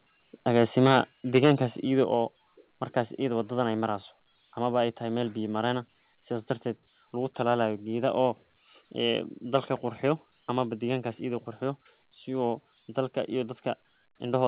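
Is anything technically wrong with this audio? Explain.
Yes. Two problems stand out.

Microphone overload occurs at 0.56 to 1.01 s, 1.34 to 1.52 s before "idho oo", and 9.55 to 9.57 s before "qurxiyo amaba deqankas edha". Peaks likely exceed the converter limit by about 7 dB, then about 2 dB, and their flattened tops sound harsh and crackly.

The microphone volume stepped down at 1.02 s and 2.04 s. Each time, the level drops suddenly by about 4 dB, likely from automatic gain reduction reacting to the clipping.

The call path passes nothing above 4 kHz, which fits narrowband telephone-style coding.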